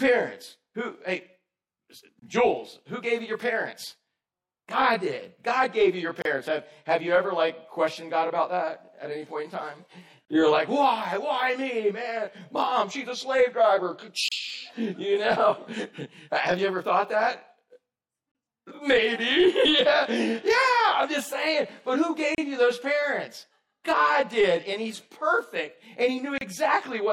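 Separately encoded pieces were joined without trimming encoder delay and padding, leaving a gap at a join of encoded pieces roughly every 4 s: 2.2 s (25 ms), then 6.22, 10.25, 14.28, 18.32, 22.35 and 26.38 s (32 ms each). Each cuts the sound with smeared edges before it resumes.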